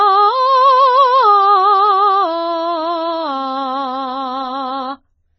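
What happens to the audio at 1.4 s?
At 1.4 s the music is likely passing through heavy AAC compression, present throughout. A bitrate starved enough to suggest about 16 kbps removes everything above 6 kHz, leaving it dull, smeared and warbling.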